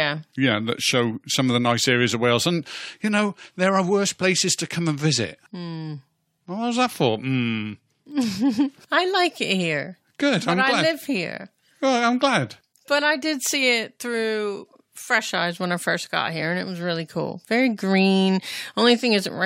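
No technical faults can be heard anywhere in the recording; the signal stays continuous and stable throughout, with nothing that points to a problem in capture, processing or playback.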